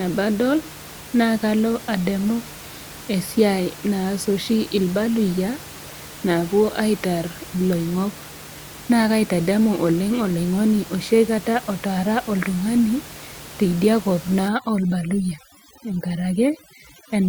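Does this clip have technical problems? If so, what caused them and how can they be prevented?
Yes. From 14.48 s to the end at 17.3 s, overdone noise removal sets in: a noise reduction stage set too aggressively cuts individual frequency bands it mistakes for noise, taking soft parts of the speech too, so the background drops and breaks up into twinkling specks. Keeping the reduction strength moderate prevents this.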